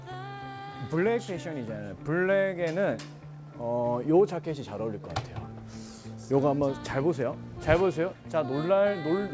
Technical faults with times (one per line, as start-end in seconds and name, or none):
none